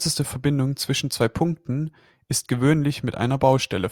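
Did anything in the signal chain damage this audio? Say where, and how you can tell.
Yes, at the converter. Sample clock jitter runs through the whole speech clip: there's a fine hiss and grain riding on the loud and bright parts that disappears in the pauses, so it tracks the signal instead of sitting underneath it like a noise floor. The clock is wobbling by a couple of microseconds, so each sample lands a touch early or late. Steep, fast-moving waveforms turn that timing error into amplitude error, here roughly 30 dB below the signal.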